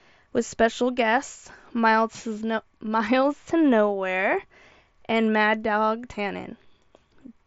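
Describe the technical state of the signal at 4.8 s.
At 4.8 s the speech is intact, carried through the Bluetooth mSBC headset codec with its normal band limit, nothing reaching above about 7.7 kHz.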